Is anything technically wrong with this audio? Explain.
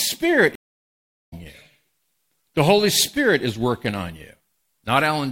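Yes. From 0.55 to 1.34 s there is a stream reconnect: the speech goes silent for 767 ms while the connection drops and a new decoder starts mid-stream, then resumes about 0.7 s further on and eases in. Unlike a simple dropout, nothing is recovered, and the speech skips ahead.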